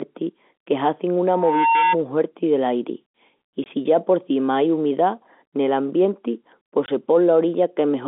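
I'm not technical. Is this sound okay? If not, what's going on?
No. From 1.28 to 1.97 s, right after "que hazin", a piercing whistle near 913 Hz swells up over just under half a second until it's about as loud as the speech. That's loudspeaker feedback squeal: the microphone picked up its own loudspeaker, and the sound looped round and round, growing louder at one pitch.

Twice the sound briefly drops out: at 3.64 s, between "del airi I" and "si ya", and at 6.86 s, just after "ai umidá nel ambienti", each gap lasting 20 ms. This is packet loss filled with silence. Each gap fits one lost chunk of audio that the receiving end replaced with nothing.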